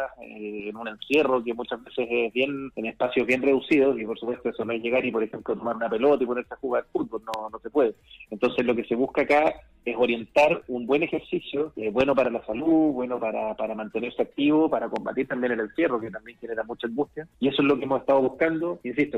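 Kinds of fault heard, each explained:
Loud pop: a sudden voltage pulse, likely from a plug, switch or static, lands as a sharp thump at 7.34 s, a double pop at 12.01–12.27 s and a softer one at 14.96 s, up to about 15 dB above the sound. Unlike a dropout, the audio carries on underneath.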